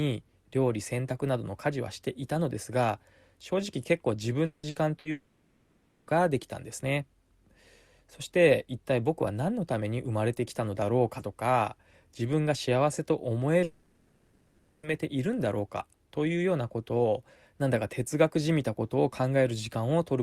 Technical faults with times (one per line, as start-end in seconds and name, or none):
4.45-4.66 long network dropout
4.69-5.08 burst of packet loss
5.11-6.10 long network dropout
13.63-14.86 long network dropout